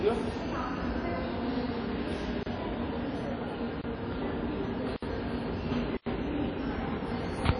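Blocks of digital silence cut into this recording of everyday sounds at 2.43 s (about 31 ms), 3.82 s (about 24 ms), 4.96 s (about 63 ms) and 5.97 s (about 93 ms). Each time the audio drops straight to nothing and returns with no fade, as a short hole. The output buffer was not filled in time or a calculation produced invalid values, and the longest gap fits a 4096-sample buffer. Throughout, plainly audible transform-codec damage, likely from WMA compression at a low bitrate around 32 kbps, leaves nothing above 10 kHz. Long coding blocks smear quantisation noise over tens of milliseconds, and weak spectral lines are zeroed, giving a ringing, washy texture with hiss that rises and falls with the sound.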